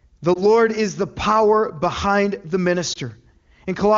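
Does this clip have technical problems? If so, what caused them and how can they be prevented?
Yes, there are lost AMR speech frames, each a single dropped 20 ms frame. At 0.34 to 0.43 s, just before "is the power behind", and at 2.93 to 2.98 s, after "the power behind the", the decoder papers over the gap with a brief dip or warble. Better radio coverage or stronger error protection would prevent it.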